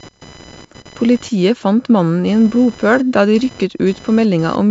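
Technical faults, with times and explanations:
Throughout: computer activity noise, a buzzing whine pulsing at around 1 kHz, sitting roughly 25 dB below the speech. Processor, graphics or mouse load currents disturb the audio circuit's shared ground, so the buzz tracks the machine's activity, not the speech.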